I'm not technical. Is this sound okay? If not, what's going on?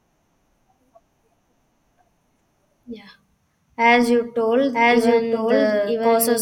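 No. From 4.73 seconds to the end, there is a doubled audio track. The speech is heard twice at once. A second copy trails the first by about a second, at about the same loudness. It cuts in suddenly, with no fade. It sounds clean, not like a room echo. This is likely the same audio being captured twice, once through a slower route, or an edit that left two copies out of step.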